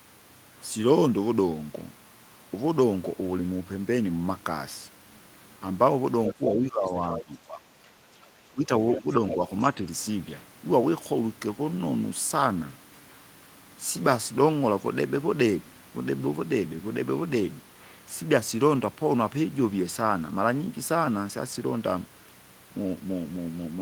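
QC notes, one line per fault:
6.27–6.34 s, other side's voice leaking through: a brief scrap of a second voice, only a little quieter than the talker, likely loudspeaker echo the canceller missed.
6.34–7.92 s, speech suppressed in double talk: the talker's voice dips by roughly 15 dB in pieces across most of this span, likely the canceller ducking everything while both sides spoke.
6.86–7.15 s, other side's voice leaking through: a faint second voice sits well under the talker, likely residual echo slipping past the canceller.
8.52–9.4 s, speech suppressed in double talk: a shorter stretch where the voice drops noticeably, around 15 dB at worst, likely the canceller confusing the talker with the far end.
8.95–9.35 s, other side's voice leaking through: a second voice sits beneath the talker, roughly 10 dB down, likely echo left unremoved during overlapping talk.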